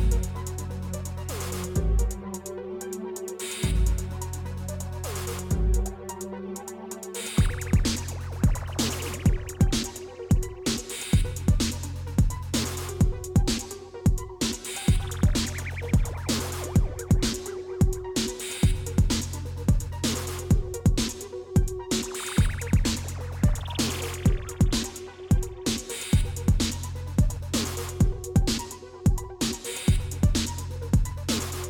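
No technical faults can be heard anywhere in the audio.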